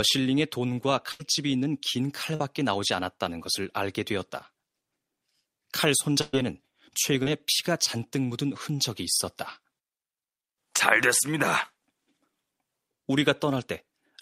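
At 1.11 to 1.21 s there is a burst of packet loss: about 80 ms of the stream failed to arrive in time, and the receiver extended the preceding sound for 79 ms while fading it down. This produces a held buzz or dying hiss, then speech picks up past the gap with that stretch missing. The same fault recurs at 6.21 to 6.35 s, longer this time, with 120 ms missing and 119 ms filled by the decaying continuation. The output never drops to silence there.

Short concealed packet loss occurs at 2.35 to 2.41 s, where 40 ms went missing and 38 ms of synthesized continuation, built from the previous pitch or noise shape, was blended back into the real signal. It registers as a brief smear or wobble. At 7.23 to 7.28 s a similar 40 ms gap was covered by 30 ms of concealment, leaving a brief smear or wobble in which a short consonant can disappear.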